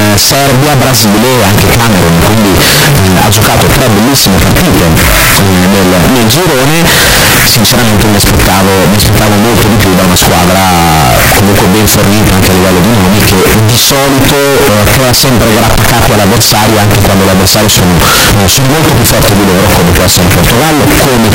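Signed and unsigned mixed up, from start to finish: the whole clip of speech is buried under a very loud, harsh distortion, and the pauses are just as loud as the talking. The likely cause is 16-bit samples being read with the wrong sign convention, which flips the top bit. Every point where the waveform should pass gently through zero instead jumps across the full range, so near-silent moments become loud noise.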